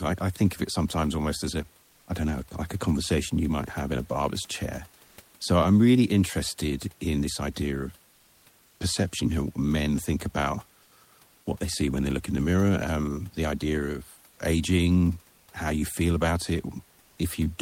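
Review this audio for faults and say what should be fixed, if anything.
Comfort noise in place of the background appears twice, from 5.05 to 5.17 s and from 17.05 to 17.17 s. The likely cause is discontinuous transmission in the codec, such as Opus DTX: the sender stops transmitting during a pause and the receiver fills the gap with synthetic noise. Each time, about 120 ms of the real room noise, sitting about 35 dB below the speech, gives way to a flat, featureless hiss roughly 1 dB different in level. To prevent it, disable DTX on the sending side.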